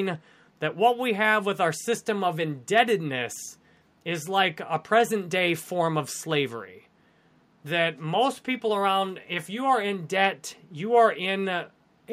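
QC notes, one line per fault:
No faults heard.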